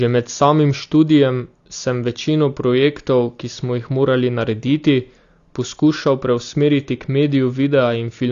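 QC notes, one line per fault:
throughout AAC compression: plainly dull, smeared speech, a hard spectrogram ceiling at 7.1 kHz, likely AAC-LC quantising at a bitrate around 32 kbps.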